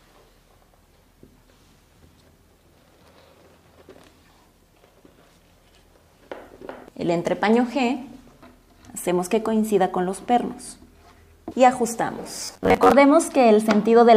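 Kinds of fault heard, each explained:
Robotic sound from repeated short buffers: from 12.45 to 12.92 s the sound becomes a rigid, metallic buzz fixed at 93.8 Hz, likely because new audio arrived too seldom and the last 10.7 ms segment was looped, with roughly half the material repeated.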